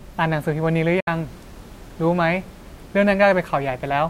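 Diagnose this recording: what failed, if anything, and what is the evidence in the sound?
Speech fades out within 8 ms and goes silent from 1.00 to 1.08 s: a digital broadcast dropout, with the receiver muting failed frames, consistent with two lost frames.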